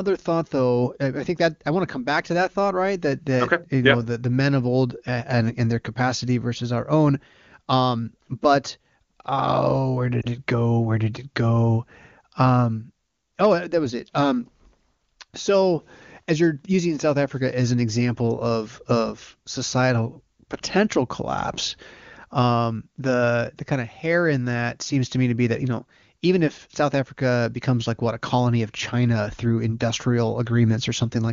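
At 10.22 to 10.26 s, between "but oh where" and "it go", lost AMR speech frames cause a brief dip or warble, consistent with one 20 ms frame concealed by the AMR-WB decoder with fading gain.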